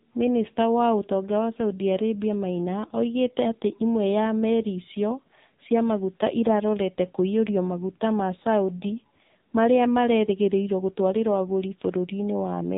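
From start to finish the speech carries AMR narrowband mobile codec damage, and it is heavy. Nothing survives above 3.8 kHz, and the vocal-tract model, starved of pulses, renders the voice buzzy and synthetic, consistent with a low mode around 6.7 kbps.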